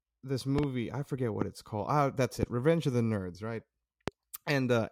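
Loud pops strike the speech at 0.59–0.66 s (a double pop, before "I forget"), 1.42–1.44 s (before "it's called"), 2.43–2.45 s and 4.08–4.10 s. They peak roughly 15 dB above the speech, the last around 20 dB. The likely cause is sudden voltage pulses from a plug, switch, static or driver glitch.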